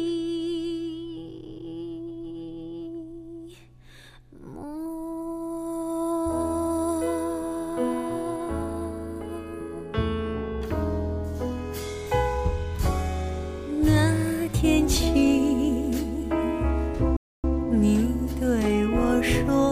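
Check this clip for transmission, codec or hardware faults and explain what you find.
One fault is present: a playback stall from 17.17 s to 17.44 s. The sound cuts out mid-flow for about 270 ms, then carries on. The likely cause is the player running short of buffered data, or its output thread being blocked, leaving the output silent until it recovered.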